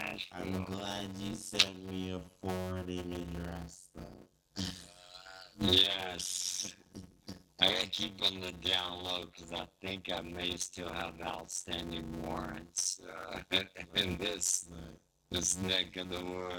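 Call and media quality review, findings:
Block size mismatch (padded), throughout: short writes zero-filled into longer reads, buzz near 92 Hz, audio slowed to about 0.53x at normal pitch; fits 256-sample writes.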